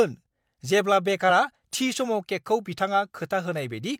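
At about 1.26 to 1.30 s the speech jumps forward, which is compressed frames skipped: a run of coded frames never got decoded, so roughly 40 ms of audio is just gone.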